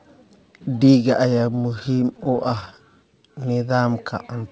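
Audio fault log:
1.34–2.80 s, repeated stalls (stutter): Packets kept reaching the receiver late, so its jitter buffer ran dry about 25 times across this stretch. At each gap the receiver carried the previous sound forward until fresh audio arrived. None of these stalls is long, the longest being about 17 ms, but together they fill roughly 0.24 s, about 17 percent of the span. Nothing is lost, yet the sound drags and stutters.
3.23–3.88 s, jitter buffer slow-down: The jitter buffer was short of reserve, so the receiver stretched the audio by repeating single pitch periods and small slices of pauses many times over, adding about 74 ms. The passage plays at roughly 90 percent speed while the pitch stays where it was. Sounds come out drawn out.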